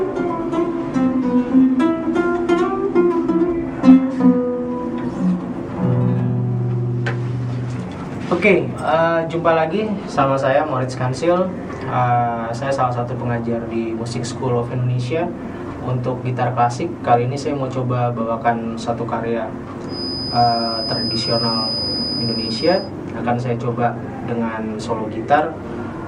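From 19.85 to 22.93 s a thin, steady whistle at 5 kHz sits a few decibels beneath the sound, swelling and fading slowly in level. This feedback whistle likely comes from a loudspeaker-to-microphone loop held right at the edge of feedback, sustaining one tone without building.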